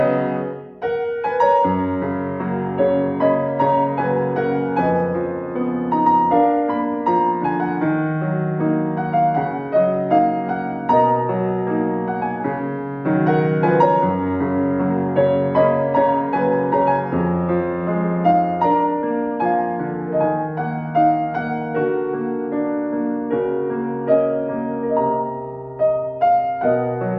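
No technical faults can be heard anywhere in the audio, and the signal stays steady and intact throughout.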